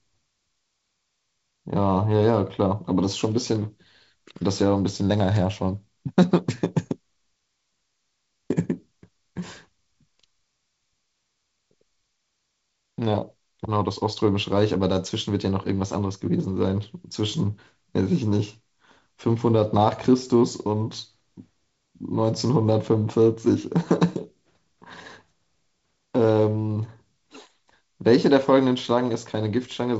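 The speech comes through G.722 wideband telephone coding with no technical faults, its content stopping at about 7.7 kHz and its light coding noise fitting the codec's 48 kbit/s mode.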